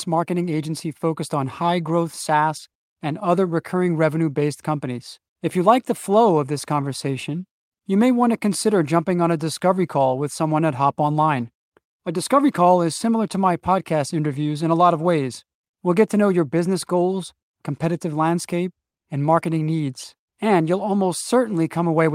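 Nothing goes wrong anywhere in this speech recording, so there's no technical fault to point to at any moment.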